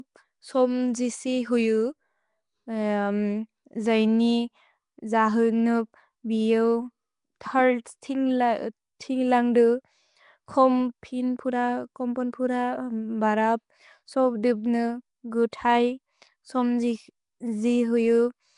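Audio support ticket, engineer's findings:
Nellymoser compression, throughout the speech. Symptom: rough, hissy halo around the voice with a smeared, underwater quality, plainly audible; nothing above 10.6 kHz. Probable component: likely a Flash-era Nellymoser Asao encode, sound consistent with roughly 44 kbps. Mechanism: 256-sample blocks at a fixed two bits per sample; bands too weak to earn bits get filled with noise, producing the hiss and the blurred, watery texture.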